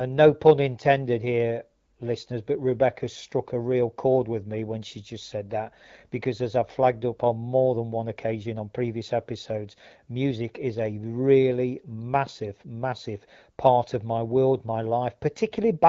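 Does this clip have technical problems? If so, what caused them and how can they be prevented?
No, no technical faults.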